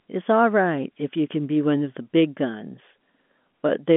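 Nothing goes wrong anywhere in the clip; it's just telephone-line speech carried by G.711 A-law coding, so the sound sits inside the narrow phone band with nothing above about 3.8 kHz, the way a landline call would.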